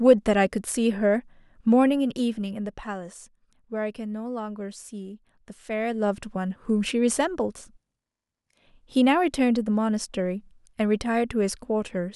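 In this speech clip, a gain control moves the level in coarse unsmoothed steps, producing zipper noise. From 1.9 to 2.98 s the level drops by roughly 10 dB, and from 5.62 to 6.2 s it rises by a similar amount. Each jump comes at around fifty steps a second and leaves a tiny click, so a fine ticking buzz rides on the speech while the level moves, then stops once it settles.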